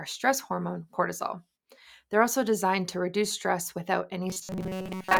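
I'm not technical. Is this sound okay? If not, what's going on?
No. From about 4.28 s to the end, right after "to reduce stress without", the most likely cause is that new audio was arriving too slowly, so the playback kept repeating a tiny slice, about 5 ms long, instead of the real sound. That is robotic sound from repeated short buffers. For most of that stretch the repeats replace the real audio, leaving a stiff, metallic buzz at a fixed pitch of 188 Hz that only loosely follows the speech.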